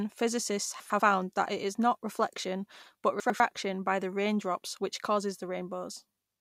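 Chunks out of order: a 100 ms chunk of this speech arrived one chunk late and played after its successor, at 0.8 to 1.0 s, just before "that it is not," and at 3.2 to 3.4 s, between "is not reflection but" and "by the raindrops which." Each swap produces a brief jumbled stretch with hard joins.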